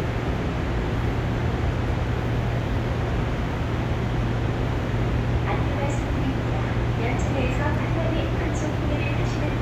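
No technical faults can be heard anywhere in this recording of sounds.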